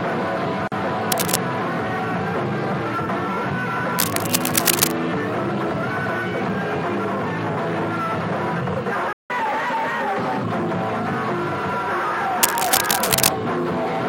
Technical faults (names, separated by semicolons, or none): gap at a join of encoded pieces; cable scratch noise; playback stall; catch-up at higher speed